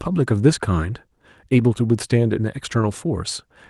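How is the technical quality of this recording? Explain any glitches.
No glitches can be heard in this speech recording: the signal is steady and intact throughout, carrying the character of a call codec whose high end tops out at about 12 kHz.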